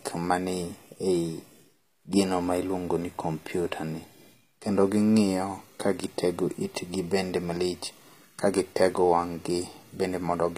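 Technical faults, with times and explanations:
Throughout, likely HE-AAC compression: gritty, lispy sibilance from treble rebuilt by band replication above a low coded band, unlike plain lowpass dullness; nothing above 15.5 kHz.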